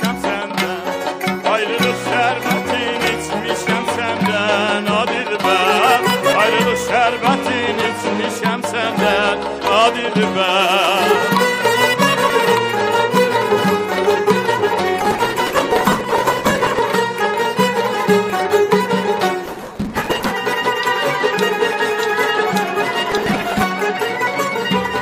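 Overlap between stream segments at 12.30 s: two segments' time stamps overlap at a 6-second boundary, so about 6 ms of audio is cut and the waveform jumps in a tiny skip.

Processor overload crackle from 15.01 to 16.79 s: deadlines for buffers of roughly 1.5 ms are missed around 150 times, and each missed buffer is skipped. The result is a stretch of gritty crackle riding on the sound.

Overlap between stream segments at 18.30 s: the next 6-second boundary again loses about 5 ms, heard as a tiny skip.

Processor overload crackle from 19.46 to 20.31 s: roughly 200 skipped buffers tear the sound into crackle.

Processor overload crackle from 23.10 to 23.63 s: about 50 skipped buffers give a shorter burst.

Overlap between stream segments at 24.27 s: a third boundary overlap drops about 6 ms as a small jump.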